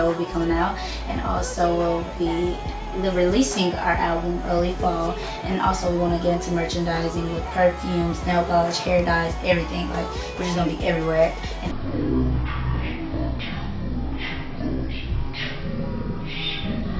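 At 11.71 s the audio falls into a wrong sample rate fault that lasts to the end of the clip. The samples are being clocked out far slower than they were captured, with no conversion, so everything runs at 0.363 times normal speed and drops 17.6 semitones in pitch together. The sound becomes slow, drawn out and deep. The ratio fits 44.1 kHz material played back at 16 kHz.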